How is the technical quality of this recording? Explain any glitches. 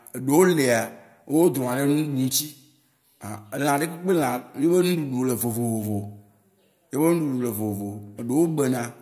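No technical glitches can be heard in the recording, and the signal stays continuous and intact throughout.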